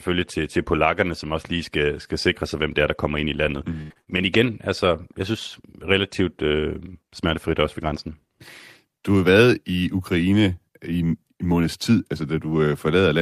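A speech clip with repeated packet loss (robotic sound) from 3.45 to 4.35 s, between "der kommer ind i" and "altså jeg synes relativt". Four short dropouts, the longest 84 ms, are patched by stretching the preceding sound, giving a choppy texture. On a spectrogram, frozen, smeared harmonic bands alternate with abrupt vertical breaks; the waveform shows repeated cycles.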